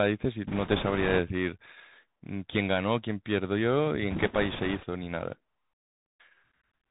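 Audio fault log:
Throughout, Bluetooth CVSD headset codec: the speech comes through a narrowband headset link whose one-bit-per-sample coding, which fits a 64 kbps CVSD stream, only signals whether the waveform should step up or down. With no content above 4 kHz, the speech sounds boxed in. The adaptive step cannot keep pace with loud, bright sounds, so those smear and distort, s sounds turn scratchy, and a grainy hiss sits beneath everything. The damage is plainly audible.
0.47–1.19 s and 4.11–4.86 s, bit errors on a Bluetooth voice link: in both stretches, flipped bits in the CVSD stream add a rushing, crackly noise over the speech rather than sharp clicks. Each bit only nudges the waveform a small step and the error fades as the step adapts. The first burst sounds a little rougher, since its error rate is around four percent, against roughly three percent in the second.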